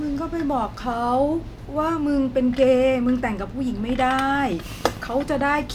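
Something, most likely interference from nearby equipment or a faulty connection, injects a train of clicks from 4.30 to 5.63 s. About twenty similar pulses arrive unevenly, roughly 14.5 per second, each peaking about as loud as the speech, heard as rapid irregular ticking over the voice.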